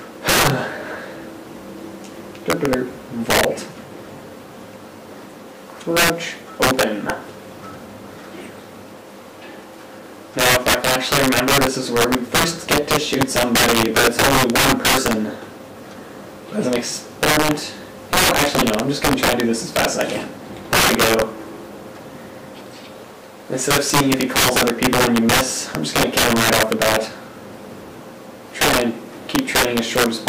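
Integer overflow runs through the whole clip. The gain was pushed about 14 dB too far, with no limiting. Peaks past the largest integer wrap to the opposite sign. Roughly 3 percent of samples flip. Loud moments break into violent cracks, far harsher than clipping.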